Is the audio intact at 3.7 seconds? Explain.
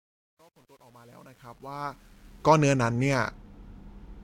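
Yes, the speech at 3.7 seconds is intact, with no fault at that moment.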